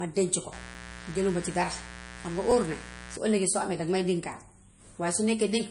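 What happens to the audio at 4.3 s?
At 4.33 s a repeated buffer occurs. New audio arrived late, so the same 2.67 ms slice of speech played twice, which fits a 128-sample buffer. The hard join makes a brief click rather than a stutter. No audio goes missing.

The speech at that moment, as throughout, has nothing above 10.6 kHz and carries the smeared, swirly artefacts of heavy MP3 coding. This is likely low-bitrate audio saved at a high bitrate. A second, generous encode cannot restore what the first one removed.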